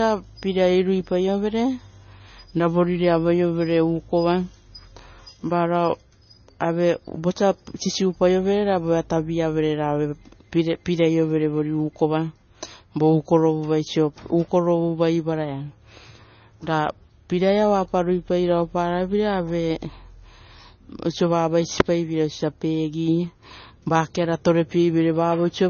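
Throughout the clip, the speech has no content above 6.6 kHz. Sibilants sound dull, with a watery, swirling texture. Heavy MP3 compression is the likely cause, which fits a bitrate around 25 kbps. The encoder cut the treble and dropped weak frequency lines.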